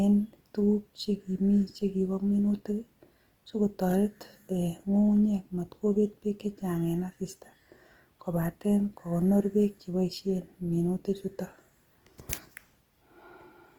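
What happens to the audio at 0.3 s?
At 0.3 s, as across the whole recording, the speech has most likely been through Opus compression at a low rate, consistent with about 24 kbps in the codec's music (CELT) mode. With too few bits, the encoder preserves each band's overall energy but fills in the detail by folding lower bands or adding noise. The bandwidth stays full, reaching about 20.1 kHz, but the speech comes out plainly grainy, rough and noisy in texture.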